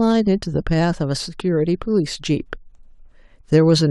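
No technical faults can be heard anywhere in the speech recording.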